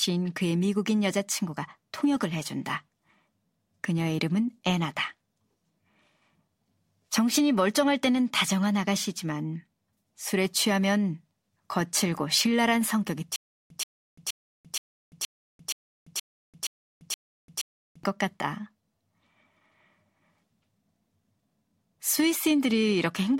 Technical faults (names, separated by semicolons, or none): stutter with silent gaps